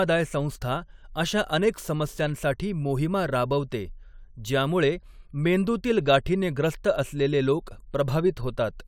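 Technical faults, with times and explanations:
No technical faults can be heard in this speech recording.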